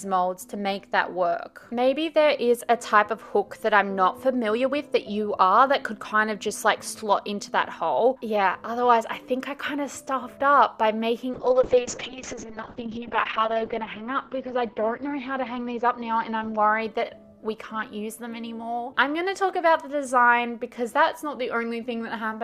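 From 11.34 to 17.63 s, a call bitrate drop: the encoder starves, audio bandwidth narrows from 20 kHz to 8 kHz, and the sound turns coarse and muffled, worst for about 1.5 s, which fits a fall from 64 kbps to roughly 6 kbps.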